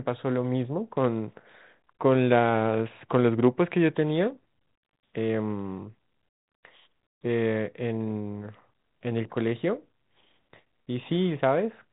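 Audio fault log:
No fault is found, so the audio fault log has nothing to record.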